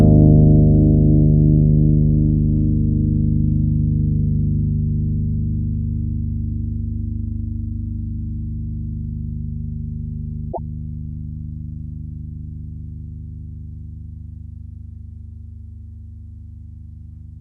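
At 10.49 s the compressed stream carries damaged data: a stretch of its bytes is corrupt, so the decoder cannot parse the frames it finds there, loses its place in the stream and has to hunt for the next valid frame header before it can resume normal decoding. Until it locks on again, what comes out is not the intended sound but a brief glitch, lasting about a tenth of a second and ending at 10.59 s.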